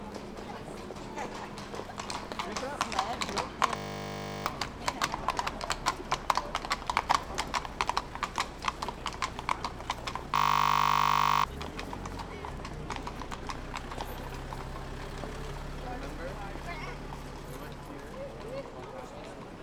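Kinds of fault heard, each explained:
System hang loop: Twice the sound gives way to a steady buzz at 50 Hz, from 3.76 to 4.46 s and again from 10.36 to 11.44 s, and when it resumes, roughly 0.7 s and then about a second of audio are missing. The buzz is one 20 ms fragment repeated exactly, because the system stalled while the audio hardware kept replaying the same short ring buffer.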